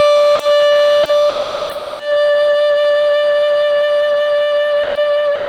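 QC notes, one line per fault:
0.35–0.39 s, 1.03 s, 1.29–1.99 s, 4.83–4.95 s, 5.35–5.49 s: sound dropped by the voice detector. The music vanishes into steady comfort noise, then resumes, except after the last drop, which runs to the end. Most likely the sender's Opus DTX mistook music for background. Unlike packet loss, there is no glitch or smeared repeat, just a clean swap of music for a flat noise floor.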